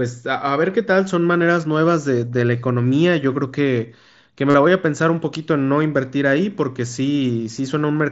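A speech recording carried over a wideband mSBC Bluetooth headset link, so the band stops at 8 kHz. From 4.50 to 4.54 s there is concealed Bluetooth headset packet loss: for about 45 ms the receiver fills the gap by repeating the best-matching slice of the preceding waveform, which fits roughly six consecutive lost frames. The run is heard as a short buzzy, steady tone at full level, with a slight warble as real audio resumes.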